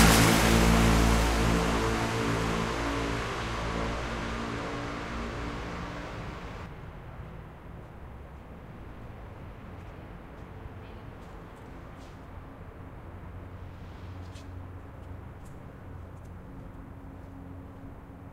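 From the opening of the clip until 6.66 s, every sound is followed by a second copy of itself about a second later, a few decibels quieter, around 5 dB down, with no decay or room colour. At 6.66 s the copy cuts out abruptly. This doubled audio track is likely the same audio mixed in twice, either captured again through a slower path or left as two out-of-step copies in an edit.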